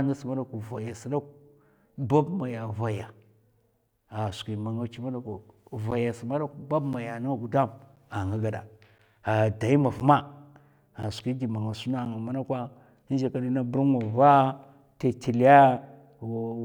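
From 5.91 s to 12.06 s, the speech has periodic USB or driver dropouts. Every 1.02 s, roughly 10 ms of audio vanishes into silence, about seven times. A blocked bus or driver causes this. The gaps sound like regular ticks wherever they fall on speech.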